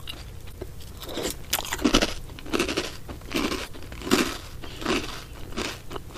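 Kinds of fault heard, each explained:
Damaged data in a compressed stream: Twice the decoder hits bytes it can't make sense of, so it misreads those frames, loses its place and hunts for the next valid frame header before playback carries on. You hear it as a short, garbled blip of about 50 ms, first at 0.49 to 0.54 s and again at 3.64 to 3.69 s, where the sound briefly turns into something that isn't part of the audio.
Processor overload crackle: From 1.05 to 1.67 s the processor can't keep up, and dozens of small audio buffers in a row miss their deadlines. Each buffer is roughly 10 ms, and the missed ones are simply skipped, so the audio gets chopped into little gaps with hard edges. Over that stretch of about 0.6 s it comes across as gritty, tearing crackle laid over the sound, and it stops once the load eases.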